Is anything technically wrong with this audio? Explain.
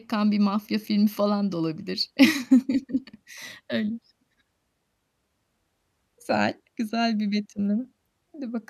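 No, there is nothing technically wrong with this speech recording. I can't hear any defect that needs explaining or fixing.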